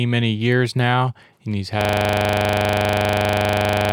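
At 1.81 s, just after "years now and he's", the audio locks into a system hang loop that runs to the end. The driver or machine stalled while the sound hardware kept replaying its ring buffer, so one 40 ms slice repeats exactly about 55 times, producing a steady 25 Hz buzz. Unlike an underrun stutter, which breaks up and then carries on, this repetition is identical each cycle and never moves forward to new audio.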